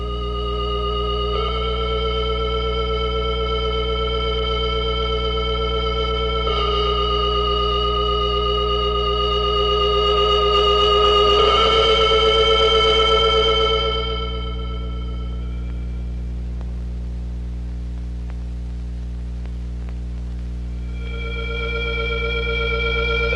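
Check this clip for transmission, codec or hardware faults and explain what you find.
There is one hardware fault, present from start to finish. Mains hum: a ground loop or nearby transformer couples the 60 Hz power line into the signal, giving a steady low drone only slightly quieter than the sound itself, shown as a bright unbroken horizontal line at 60 Hz on a spectrogram.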